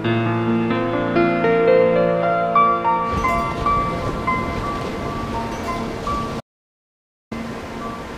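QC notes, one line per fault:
6.41 to 7.31 s, audio dropout to silence: the sound cuts off abruptly and the track falls to silence for about 0.91 s, with no room tone underneath, then resumes mid-flow. The input was likely lost while the recorder kept writing silence, so that stretch is gone.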